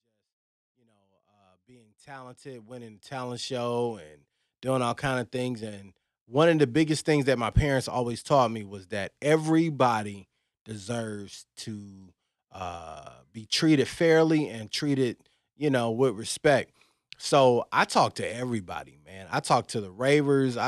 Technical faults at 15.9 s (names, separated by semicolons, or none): none